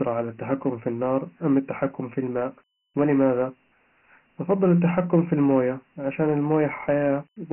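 Speech, carrying Dialogic VOX ADPCM coding throughout: nothing above 3 kHz, heavy gritty hiss tracking the voice, consistent with 4-bit samples at 6,000 per second, about 24 kbps.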